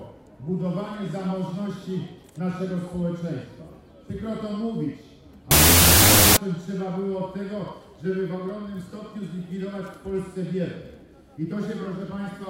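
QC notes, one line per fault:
5.51–6.37 s, wrong sample width: loud noise buries the sound, which plays at half speed and an octave low, as 32-bit float samples are read as 16-bit integers, splitting each in two.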